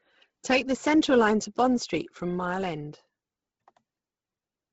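Throughout the speech, heavy Bluetooth LC3 compression, likely at about 16 kbps with 10 ms frames, leaves a breathy, grainy edge; a spectrogram shows nothing above 7.7 kHz and noise-filled upper bands.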